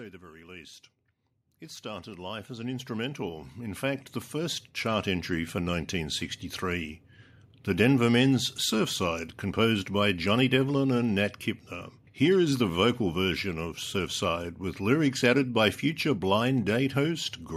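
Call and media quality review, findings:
Automatic gain rising, 1.6–7.02 s: voice and background swell together, about 17 dB up. AGC judged input too quiet, ramped gain slowly over several seconds.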